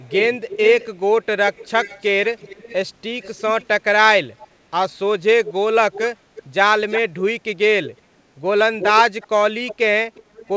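An echo leak runs from 0 to 3.66 s, returns briefly at 4.39–4.48 s, then at 5.45–7.2 s, 7.84–8.01 s and from 8.79 s to the end. A second copy of the speech trails about 350 ms behind, creeping from 346 to 362 ms. It sits roughly 10 to 25 dB down, loudest in the last two long stretches. The likely cause is a loudspeaker far end whose echo canceller let its microphone pickup through. A spectrogram shows each speech pattern repeated as a dimmer, shifted ghost, limited below 8 kHz like the rest of the call.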